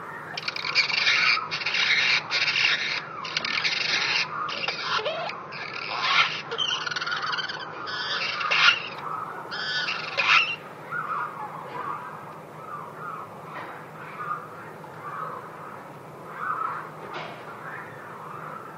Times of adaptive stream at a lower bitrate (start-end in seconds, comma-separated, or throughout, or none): 0.95-8.95